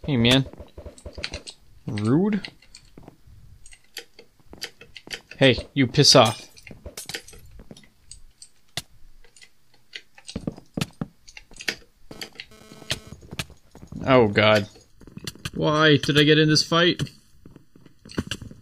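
At 12.11 s a GSM phone buzz cuts in and lasts until 13.12 s. A 2G handset nearby sent radio bursts about 217 times a second. The audio circuit rectified those pulses into the signal path. The result is a hard, raspy buzz at 217 Hz, rich in harmonics. It sits about 31 dB below the program and has no relation to it. Its brief, on-off character points to a data transfer rather than a call.

From 14.90 s to the end, a channel delay causes comb filtering. One channel runs late by a fraction of a millisecond. When the two are summed to mono, shared content cancels at evenly spaced frequencies. The first notch falls somewhere around 700 Hz, with more above it. The sound turns hollow and phasey. The notches stay fixed in place throughout.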